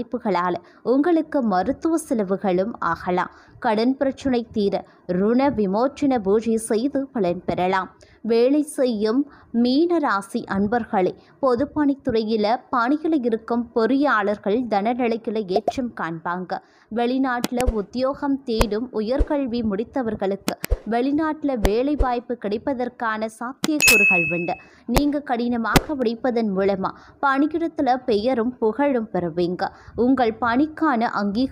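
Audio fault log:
17.44–17.61 s, 18.61 s, 20.49–20.65 s, 21.65 s, 23.64–23.94 s, 24.97 s and 25.76 s: integer overflow. Loud peaks push past the top of the integer range by only about 0 to 2 dB. They are not held at the limit. They wrap around to the opposite extreme. Each wrapped sample jumps across the full range in one step. That makes violent cracks, much harsher than clipping.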